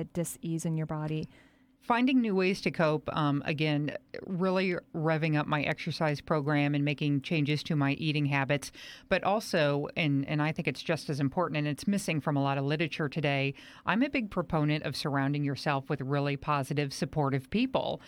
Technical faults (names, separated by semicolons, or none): none